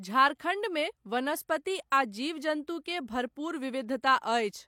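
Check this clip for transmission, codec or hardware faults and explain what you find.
One codec fault is present. At 1.90 s, pre-echo: block-wide codec noise leaks 15 ms before an attack, heard as brief hiss, seen as spectrogram smear before it.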